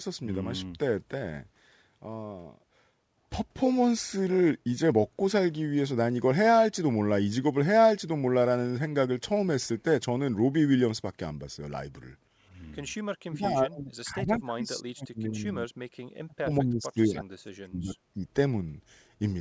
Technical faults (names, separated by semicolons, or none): speech suppressed in double talk